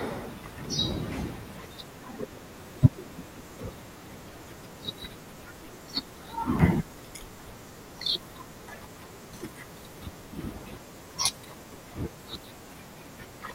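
At 3.72, 6.60, 10.77 and 12.35 s the speech jumps ahead about a tenth of a second, likely a dropped buffer (overrun) splicing the audio straight together.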